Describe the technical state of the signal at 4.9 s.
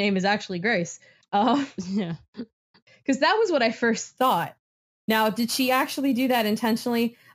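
At 4.9 s the speech carries imaging from sample-and-hold upsampling, running from 4.18 s, just after "was what I first", to the end. Sample repetition from 16 kHz to 44.1 kHz mirrors the spectrum into 8–16 kHz at about -18 dB, a metallic fizz. A spectrogram shows that inverted copy; the waveform shows staircase steps.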